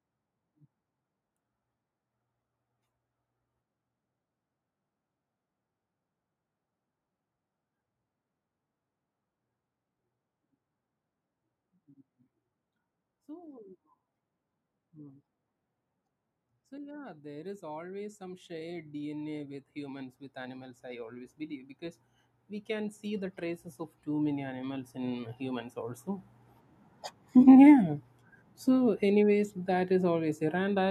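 From 16.69 to 22.09 s, automatic gain rising lifts the level by about 12 dB. The gain control judged the input too quiet and kept raising it. Speech and background swell together. It happens again from 22.66 to 26.35 s, by about 7 dB.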